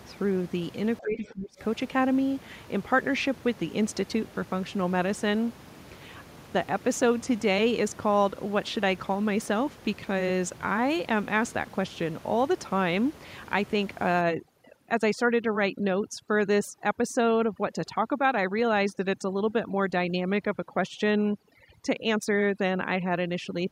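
A speech recording with background room noise sitting about 20 dB below the voice. From 1.0 to 1.6 s the voice sinks by roughly 20 dB, affected for about half a second in total, most likely speech suppressed in double talk, where the echo canceller attenuated the talker along with far-end echo. From 14.21 s to the end, the background drops and breaks up into twinkling specks. This is overdone noise removal: bands near the noise estimate are cut hard, taking quiet speech detail with them.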